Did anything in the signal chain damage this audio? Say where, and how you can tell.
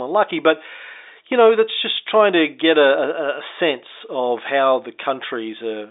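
No, no damage anywhere.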